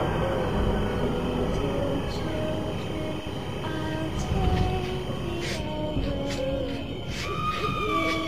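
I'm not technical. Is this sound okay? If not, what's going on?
No, there's timecode bleed from the start to about 5.56 s: a chirpy warble, roughly 1 and 2 kHz, leaking in from a timing signal on a neighbouring cable.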